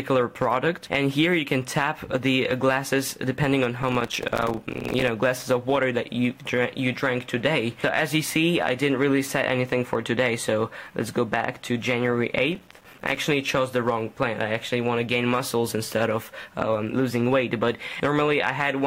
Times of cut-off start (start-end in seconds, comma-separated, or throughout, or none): none